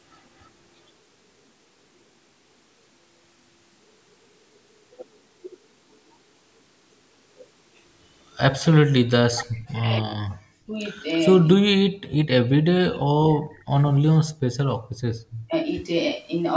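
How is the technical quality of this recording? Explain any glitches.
The speech carries two call-related faults: faint echo scraps and repeated dips in the talker's level. The audio reaches up to 8 kHz, as expected from call microphone processing.

Echo leak is heard at 0.13 to 0.18 s and 13.54 to 13.63 s. A very faint delayed copy of the speech trails by 293 ms. This is likely a far-end loudspeaker echo that the echo canceller did not fully remove and sent back.

Speech suppressed in double talk appears at 8.7 to 10.78 s, 11.78 to 13.82 s, 14.39 to 14.53 s, 14.74 to 15.03 s and 15.47 to 15.7 s. The voice drops sharply, roughly 40 dB at its deepest, and less in the last one. This is likely because the echo canceller mistook overlapping talk for echo and muted both.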